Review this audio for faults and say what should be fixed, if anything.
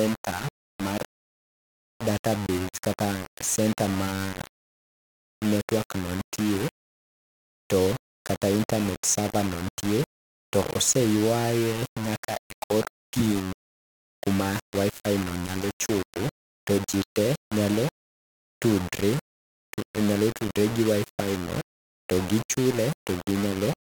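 Right through the clip the speech carries grainy, gritty distortion that moves with it, quiet bits sputter or drop out, and the error sits roughly 10 dB under the signal. That's low bit depth without dither, likely a 4-bit rounding step. Keep plenty of bits through the chain and add dither whenever you reduce word length.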